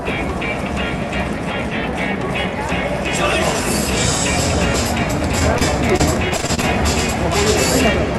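From 5.39 to 6.65 s, repeated packet loss (robotic sound) breaks the audio into a choppy stutter. Short holes, none longer than about 29 ms, are patched by stretching the preceding sound. On a spectrogram this shows as repeated vertical seams and smeared, copied frames.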